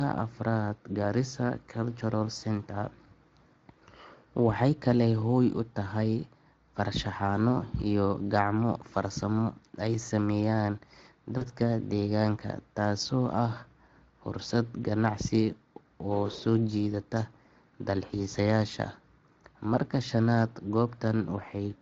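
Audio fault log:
11.37–11.46 s: VoIP packet loss concealed by the speech codec. The Speex decoder repeats its last pitch and filter across a 40 ms gap, producing a fading buzzy or noisy smear.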